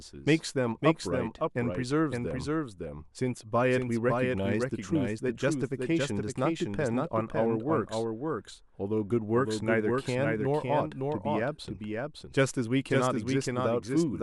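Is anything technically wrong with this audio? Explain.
Yes. A doubled audio track runs through the whole speech clip. A second full-band copy of the speech trails the original by about half a second. It sits roughly 5 dB below the main signal. Every syllable returns as a distinct, dry repeat with no decay or room colour. The likely cause is the same signal reaching the mix twice, once through a slower path.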